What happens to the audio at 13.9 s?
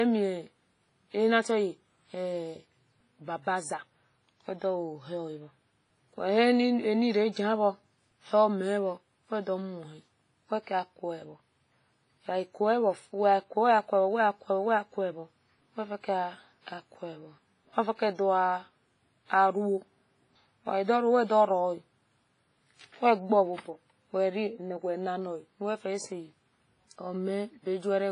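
At 13.9 s the speech carries the ringing, washy smear of WMA compression, heavy throughout the clip. A transform codec at a low bitrate, likely near 24 kbps, spreads quantisation noise and zeroes weak lines. A spectrogram shows patchy holes and nothing above 10.4 kHz.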